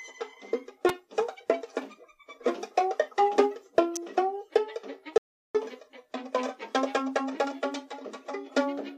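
Music, with two electrical switching spikes: sharp snaps at about 0.89 s and 3.96 s, each roughly 8 to 11 milliseconds long and sitting right on top of the music. They're likely a nearby switch or motor arcing and the audio line picking it up. Then there's an audio dropout to silence from 5.18 s to 5.55 s, roughly 0.37 s where everything vanishes into silence with no room tone. That's likely the input briefly disconnecting or muting while the recorder kept writing.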